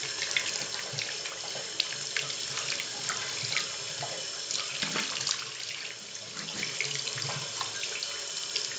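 From start to end, the audio carries a steady train of faint ticks at 10 per second, the sign of a resampler restarted on every block. Each 100 ms block was converted alone, so its edges were computed against silence or wrapped samples instead of their real neighbours. The rate change points to 16 kHz raised to 48 kHz. Unlike buffer underrun clicks, these ticks are perfectly regular, leave no gaps, and vanish whenever the sound itself goes quiet.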